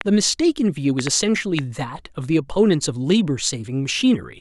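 A train of clicks runs from 0.01 to 1.6 s: about four similar pops, unevenly spaced near two per second and well above the speech, likely interference.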